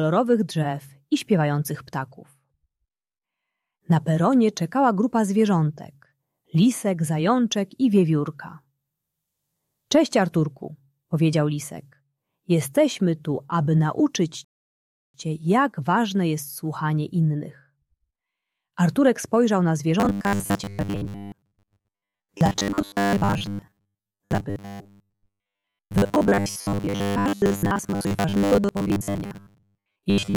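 At 14.45 s the player ran dry of downloaded audio, a rebuffering stall, and waited for more data before continuing. The sound drops to silence until 15.14 s, then picks up exactly where it stopped, with nothing lost but about 0.7 s added.

From 20.0 s to the end, the likely cause is new audio arriving too seldom, so the software repeats the last short buffer while most of the real audio is skipped. The result is robotic sound from repeated short buffers: a rigid, metallic buzz at 100 Hz, which fits a 10 ms buffer.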